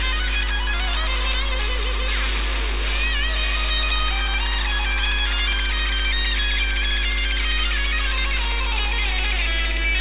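No technical faults can be heard anywhere in this audio.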